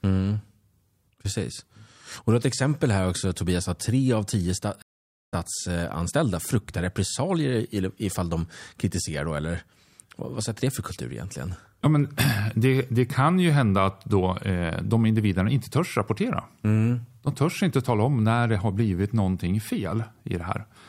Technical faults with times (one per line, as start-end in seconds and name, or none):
4.82-5.34 stream reconnect